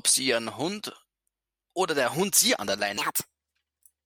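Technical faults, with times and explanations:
2.98–4.06 s: section at the wrong speed. The closing stretch was likely played against a mismatched clock, running 1.48 times too fast. The speech to the end becomes rushed and jumps up about seven semitones, with pitch and tempo rising together.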